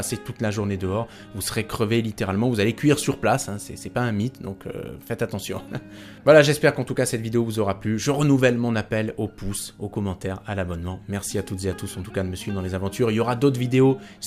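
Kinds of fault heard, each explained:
Lost LE Audio frames: at 9.12 s a 7.5 ms stretch, which fits one LC3 frame, is filled by the decoder repeating the previous spectrum with randomised signs. Unlike a plain dropout to silence, the gap sounds like a brief noisy smear.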